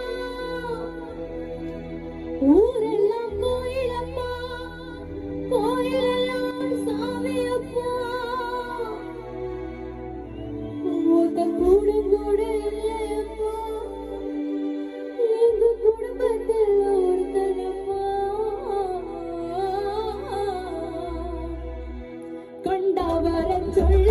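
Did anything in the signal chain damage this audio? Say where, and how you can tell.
Yes. From 6.51 to 6.61 s the level falls abruptly by about 6 dB and then recovers, which points to one channel dropping out, likely at an intermittent analogue connection. Sound common to both channels halves after the mono sum instead of going silent, which distinguishes it from a full dropout.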